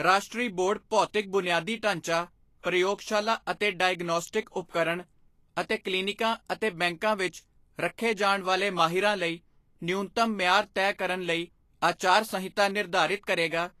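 Throughout, the treble stops sharply near 14.2 kHz and the remaining high end sounds hissy and grainy, with roughened tones. This is most likely Vorbis compression at a low bitrate, around 35 kbps. Unlike broadband background noise, the grain follows the speech and disappears in pauses.

From 4.70 to 4.74 s, a short hiss runs about 39 ms ahead of a sharp onset, which then lands soft and smeared. This is pre-echo: quantisation noise sized for the loud attack spills across its transform block into the quiet moment before it. Unlike a click or reverb, it comes before the attack, not after.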